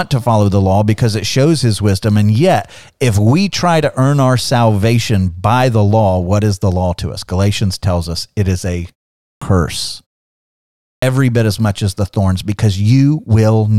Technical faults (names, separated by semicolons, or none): clipped start after a pause